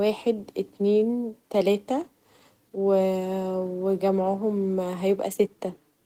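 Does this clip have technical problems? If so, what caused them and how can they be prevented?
No, no technical faults found.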